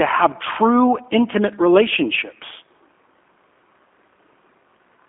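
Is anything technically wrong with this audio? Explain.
Yes. Throughout, the speech sounds thin, slightly rough and synthetic, with nothing above about 3.5 kHz and little below 250 Hz. This is G.729 codec damage, which fits an 8 kbit/s G.729A call: the voice is rebuilt from a vocal tract filter, a pitch predictor and a few pulses per frame, not carried as a waveform.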